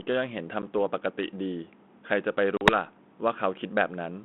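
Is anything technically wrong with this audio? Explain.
Yes. Packet loss on an ADPCM call occurs at 0.62 s (10 ms, about one packet) and 2.57 to 2.75 s (40 ms lost, a few packets). Silence fills each gap. The decoder's predictor and step size then lag the sender's, so the sound resumes with a slightly distorted stretch that soon settles. On a waveform these appear as flat holes. A spectrogram shows blank vertical gaps.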